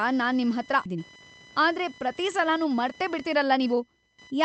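From start to finish, computer activity noise is present. Load changes in the machine's processor, graphics or mouse are pushing current through the ground the audio circuit shares, and that disturbance leaks into the signal. It comes through as a buzzy, chirping texture pulsing at around 1 kHz, sitting roughly 25 dB below the speech. It rises and falls with what the computer is doing rather than with the talker.

At 0.85 to 0.87 s, right after "ನಾನ್ ನಿಮ್ಹತ್ರ", there is a skip ahead. Around a second of audio that had already queued up was discarded, and the stream cut the built-up delay in one step. Nothing fills the join, so the speech before and after the jump is butted together with no audible gap, and the listener simply loses that stretch.

From 0.95 to 4.31 s, the jitter buffer speed-up takes over. Having collected more audio than it wanted, the receiver kept trimming short pitch-period slices to drain the excess, shedding around 0.4 s in total. 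Playback runs at about 112% of normal pace with the pitch unchanged, so the rest of the speech sounds slightly rushed, with syllables arriving a little too quickly. All of this passes through a wideband Opus call path whose highs stop near 8 kHz.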